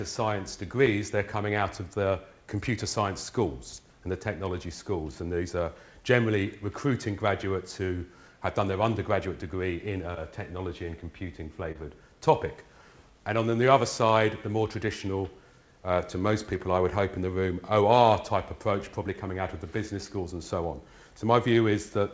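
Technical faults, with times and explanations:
11.72 to 11.78 s, short concealed packet loss: roughly 30 ms of audio never reached the decoder in time, so the receiver filled a 29 ms gap by carrying the preceding sound forward and then easing back into the real signal. You hear it as a quick smear or wobble rather than a clean dropout. It's carried on a call path with nothing above 8 kHz, which fits G.722 at 64 kbps.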